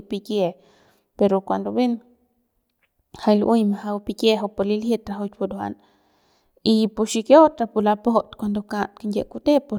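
Listening to this speech recording, nothing stood out as a technical problem at any point.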